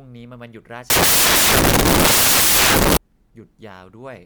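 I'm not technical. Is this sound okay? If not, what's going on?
No. From about 0.90 to 2.97 seconds, the software reading this speech recording put each sample together from the wrong bytes, so the samples were built from the wrong bytes. The tiny, fast-changing parts of each value ended up treated as the biggest parts. What you hear for those two seconds is a loud, harsh noise covering the speech.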